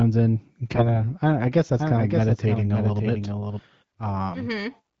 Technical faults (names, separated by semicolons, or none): AMR bit errors; doubled audio track